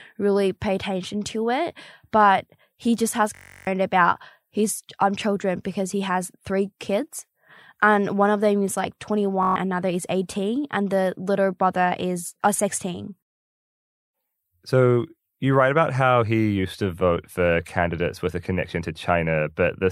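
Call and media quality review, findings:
System hang loop at 3.35–3.67 s (after "but he just has") and 9.43–9.56 s (before "another is"): a 21.33 ms segment repeats as a steady 46.9 Hz buzz. This fits a stalled driver replaying a 1024-sample ring buffer.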